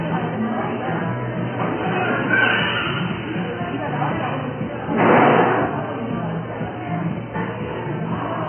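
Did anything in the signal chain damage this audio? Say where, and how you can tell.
Yes, at the codec stage: the whole clip is dull, with nothing above 3.1 kHz and a smeared, fizzy texture throughout. That's likely AAC compression, with AAC-LC at a very low bitrate (something like 12 kbps) cutting the top off and starving the remaining bands.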